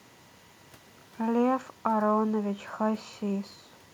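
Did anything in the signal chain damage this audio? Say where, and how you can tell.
No, nothing audible in this speech points to damage at any stage of the chain.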